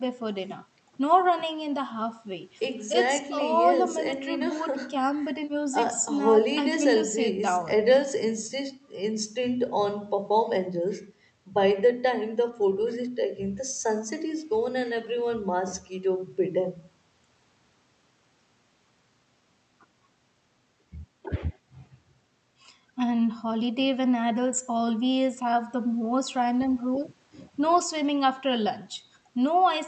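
No technical faults occur at any point in the recording, so there is nothing to describe in time order, and the speech passes through the call path as expected.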